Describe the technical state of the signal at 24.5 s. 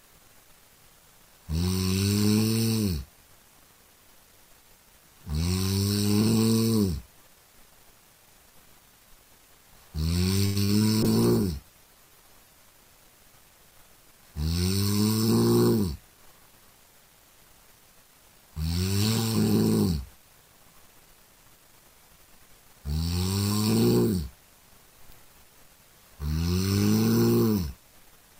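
At 24.5 s the signal is intact, with no audible dropout, distortion, glitch or other fault at that point.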